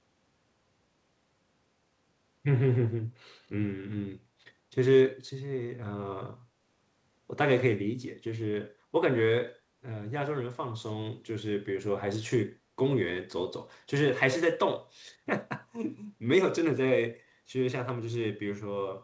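A speech recording carrying a brief echo leak: from 3.43 to 3.48 s a faint, delayed ghost of the talker's own speech slips in about 206 ms behind the original, sitting far below the main speech level. The likely cause is a far-end loudspeaker whose echo canceller let a small part of its microphone pickup through and sent it back. The band stops at 8 kHz, which fits a G.722 call path at 64 kbps.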